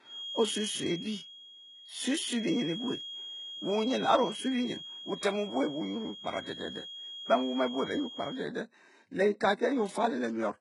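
From the start and across the whole recording, the speech carries heavy damage from what is likely HE-AAC compression at a very low bitrate, on the order of 12 kbps. The upper band is synthesised by copying lower bands upward, so sibilants sound gritty and metallic, harmonics fail to align, and nothing is present above 11 kHz.

From 0.0 s to 8.49 s a feedback whistle sits behind the speech: a thin, steady tone near 3.3 kHz, roughly 15 dB below the signal, swelling and fading slowly in level. This points to a loudspeaker-to-microphone loop held just short of runaway feedback.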